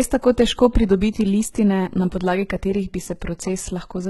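HE-AAC compression artefacts run through the whole of this speech clip. The treble reaches high but sounds synthetic: s sounds come out gritty and lispy, with a metallic sheen where the upper harmonics no longer line up with the lower ones. That points to spectral band replication, in which the upper band is copied up from below and shaped coarsely. The damage is heavy, fits a bitrate around 16 kbps, and nothing remains above 20.8 kHz; HE-AAC is the likely cause.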